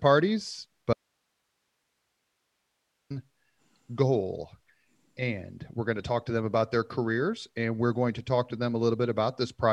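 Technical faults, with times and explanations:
0.93–3.10 s: audio dropout to a faint residue. Speech cuts abruptly, leaving only hiss roughly 50 dB down, likely from a lost feed into a still-live path.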